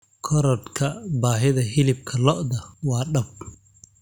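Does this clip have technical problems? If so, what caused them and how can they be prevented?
No, nothing in this speech recording points to a technical fault, so there is no cause to trace and nothing to prevent.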